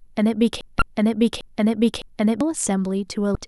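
At 0.61 s a broken-record loop begins. A piece of speech about 0.61 s long plays, then plays again exactly, back to back, four times in all. It runs until 2.41 s. The loop is likely caused by the player or stream stalling and resending the last fragment it held. Whatever speech belonged in those seconds is missing, so the audio jumps on when the loop ends.

From 0.79 to 0.82 s, inside the loop, there is damaged data in a compressed stream. It sounds like a short glitch. Corrupt bytes made the decoder misread the frames there and lose sync until it found the next frame header. The same fault returns from 3.32 to 3.35 s as another brief blip.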